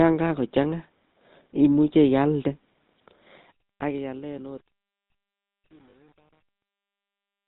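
GSM full-rate codec damage runs through the whole clip, from 0 s onward. The speech has the buzzy, gravelly roughness of the original GSM codec, which fits its 13 kbps full-rate mode. That codec rebuilds the voice from a vocal-tract model driven by a sparse, regularly spaced pulse train, so fine detail is lost and nothing above 4 kHz gets through. The result is dull, rasping speech with a clearly audible coded texture.

Truncation distortion on a fade sets in at 3.22 s and lasts to the end, in the fade-out that starts around 3 s and ends at 7.48 s. The fade was applied at too coarse a resolution, which points to a stage keeping about 9 bits with no dither. As the level drops, the waveform collapses into a few square steps. From 3.99 s to 7.48 s it is at its worst, grainy and gritty.

Lost GSM frames appear from 5.90 s to 5.96 s, a 40 ms dropout that fits two missing 20 ms frames. The decoder covers the gap by repeating the parameters of the last good frame. 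Instead of new speech, a short rough, metallic ring sustains for that moment. It sits within the already degraded fade, which adds to the harsh texture there.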